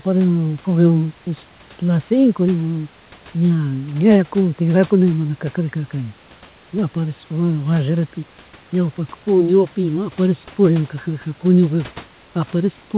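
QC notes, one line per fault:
No faults heard.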